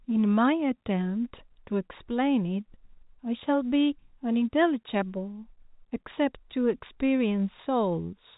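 No faults to report; the speech comes through telephone-band G.711 coding with nothing above about 3.8 kHz, as that path should sound.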